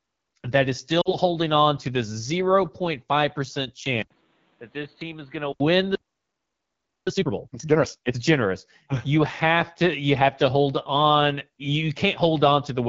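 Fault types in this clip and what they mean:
AMR wideband (HD Voice) codec: The whole clip runs through AMR-WB at 8.85 kbit/s, the second-lowest rate, and the damage is easy to hear. The codec models speech below 6.4 kHz as pulses driving a vocal tract filter and fills the band above that with shaped noise. At this rate there aren't enough bits to do that cleanly, so the speech comes out rough and raspy from start to finish.
lost AMR speech frames: Around 1.02 to 1.15 s, two frames, about 40 ms of speech, never made it through intact. The decoder filled the gap by repeating the last good pitch and vocal tract settings at falling gain, so you hear a quick smeared warble that dips away. Once good frames arrive again, the sound comes back a little weak and rough for a moment.
input switched to a poorer device: From about 4.03 to 5.60 s the sound turns dull and boxy, with a narrower band. It's likely the input jumped to a lesser microphone or a headset's call profile. 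There's an 80 ms gap at the switch, the level drops by roughly 10 dB, and new background noise comes in about 30 dB under the signal. Then it clears up again.
playback stall: At 5.95 s the audio simply stops mid-flow and stays silent for about 1.1 s, until 7.07 s. That's likely the player running dry on data or having its thread blocked, so it had nothing to output until it recovered. It's a clean dead gap rather than a fade, and it sounds like the audio froze and then picked up again.
time-compressed catch-up: Right after the stall, from 7.07 to 8.17 s, the player works off its backlog by cutting out small slices and cross-fading the rest together. The result plays at twice normal speed while keeping its normal pitch, so it sounds hurried without any chipmunk effect. This lasts until the player has caught up.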